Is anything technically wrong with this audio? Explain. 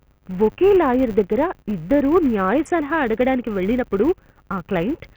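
Yes, two faults run through the whole speech clip.

The first is likely Bluetooth SBC compression, at a bit pool so small that it fits a rate near 48 kbps. The coarse sub-band quantisation strips the weakest top bands, leaves the upper treble flickering, and lays a heavy gritty, aliased noise over the speech.

The second, present throughout, is a filter restarted on every block. It loses its state each time and starts from silence, so every block opens with a small transient. Those transients form a steady 100 Hz buzz, which points to blocks of about 10 ms, and the buzz rises and falls with the level of the speech.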